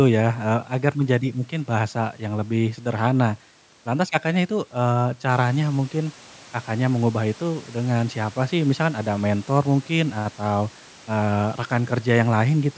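The speech shows no technical faults: the call's microphone processing trims the lowest bass and leaves nothing above 8 kHz, and the room noise behind it rises by about 10 dB at around five and a half seconds while staying about 28 dB below the speech.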